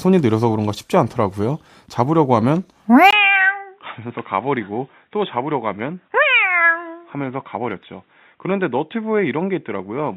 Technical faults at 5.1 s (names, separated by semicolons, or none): input switched to a poorer device